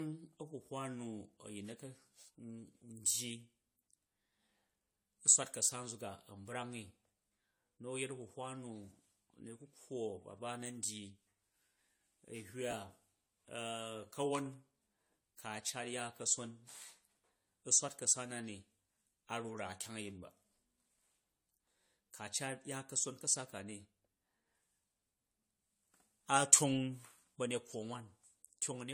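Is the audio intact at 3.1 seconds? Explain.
No, at 3.1 seconds the speech already carries the generation loss that runs through the whole clip. It sounds swirly, hollow and smeared, with softened attacks, likely from about four rounds of lossy re-encoding, which fits AAC at around 64 kbit/s, each pass piling up fresh quantisation noise.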